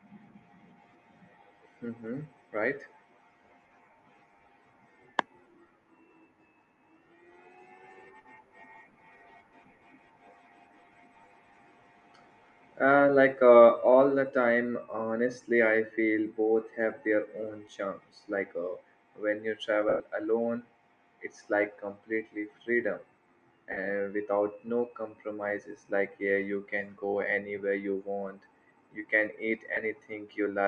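A speech clip, and the whole thing carries a grainy, breathy edge with the top end sounding noise-filled rather than clean. That's most likely Bluetooth LC3 compression, the LE Audio codec, squeezing detail out of the upper spectrum, and the damage level points to something around 48 kbps. On top of that there are lost LE Audio frames: right after "when you" at 19.89 s there's a 110 ms patch where the decoder keeps replaying the last spectrum with scrambled phase, so the voice smears into noise and starts fading. Shorter ones hit at 23.72 s (50 ms) and just after "want you can eat" at 29.74 s (30 ms), each a brief noisy blur.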